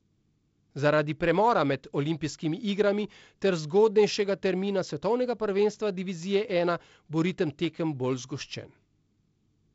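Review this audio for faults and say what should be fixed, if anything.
No faults; nothing needs fixing.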